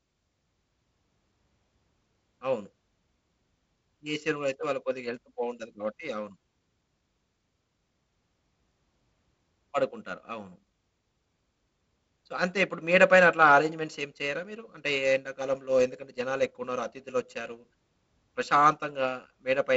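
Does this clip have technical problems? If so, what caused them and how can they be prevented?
No, this speech clip has no technical problems to fix. It has the wideband telephone character of G.722 coding, with nothing above about 7.7 kHz and the light coding texture that fits a 48 kbit/s rate.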